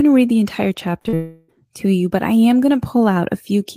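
Short concealed packet loss hits twice, at 1.01 to 1.07 s and 1.09 to 1.15 s. Each time about 40 ms of speech failed to reach the decoder, and the receiver extended the preceding sound to cover the gap. Both spots come out as a quick smear or wobble.

Straight after, from 1.15 to 1.50 s, a likely long network dropout leaves about 340 ms without real audio. Instead of silence, a stretched continuation of the last sound fills nearly the whole span as a fading buzz or hiss before normal speech resumes.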